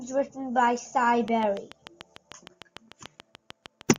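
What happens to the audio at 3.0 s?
A train of clicks runs from 1.28 to 3.97 s. About 20 regular pops arrive 6.7 times per second, peaking about 10 dB above the speech, likely from interference.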